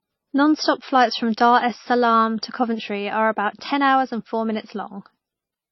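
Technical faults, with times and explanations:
Throughout: transcoding between lossy codecs. The speech carries stacked coding artefacts, heard together, with nothing above 5.8 kHz, likely from passing through MP3 at a low bitrate, then HE-AAC, then AAC-LC. On a spectrogram the top edge is a hard flat cutoff, with blotchy, patchy detail beneath it.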